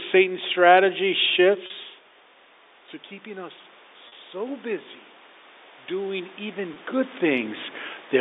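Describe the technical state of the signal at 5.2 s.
At 5.2 s the signal is intact, with no fault present at that moment.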